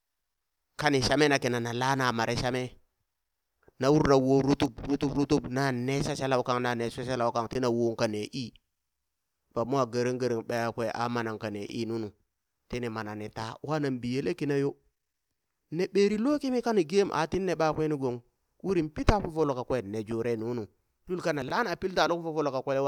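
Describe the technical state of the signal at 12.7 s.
At 12.7 s the speech signal is intact, with no fault audible at that moment.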